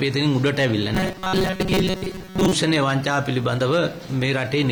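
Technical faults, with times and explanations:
0.94–2.53 s, robotic sound from repeated short buffers: delayed audio was likely covered by looping a chunk of about 5 ms, skipping most real sound and imposing a rigid metallic buzz at 188 Hz.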